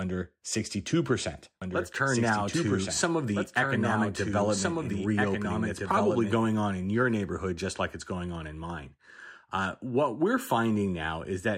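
A second capture path or an out-of-step edit likely mixed the speech in twice, producing a doubled audio track from 1.62 to 6.46 s. A dry copy trails about a second and a half behind, roughly 5 dB quieter, starting and stopping abruptly, just before "on in your neighborhood".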